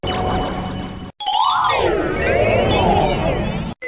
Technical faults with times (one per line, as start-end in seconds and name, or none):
none